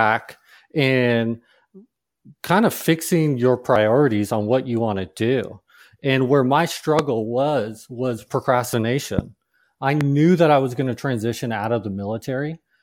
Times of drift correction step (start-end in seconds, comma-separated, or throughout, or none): none